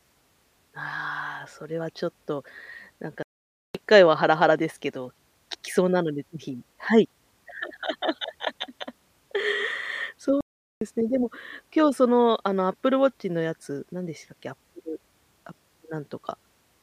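Playback stalls at 3.23 s and 10.41 s silence this speech for 0.52 s and 0.41 s, likely because the player ran dry of buffered data, before it resumes.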